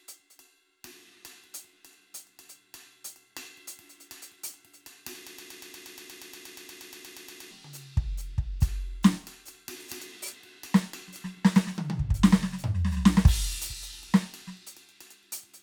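From 5.27 to 7.51 s the music sticks, repeating a 119 ms fragment 19 times back to back: a broken-record loop, likely a stalled player resending its last buffer.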